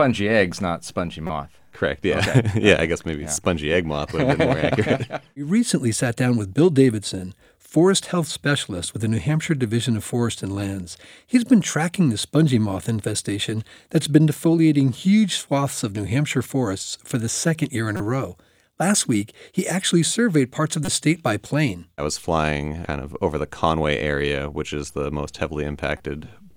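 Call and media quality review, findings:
Corrupt frame decoded at 1.27–1.30 s after "eggs not spongy", 17.97–18.00 s after "the second year in", 20.85–20.89 s after "actually surveyed parts of", and 25.98–26.00 s. Short chirps and noise bursts, the last faint. Decoder played damaged frames, misread gains spraying energy at wrong frequencies.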